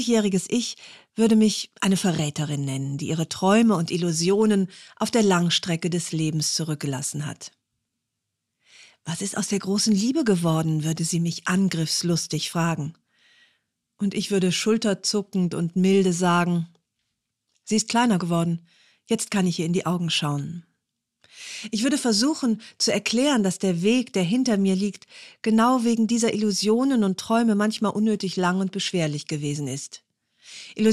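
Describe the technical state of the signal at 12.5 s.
Compressed frames skipped at 12.52 s: a short run of frames, about 20 ms, never plays, so the audio jumps ahead.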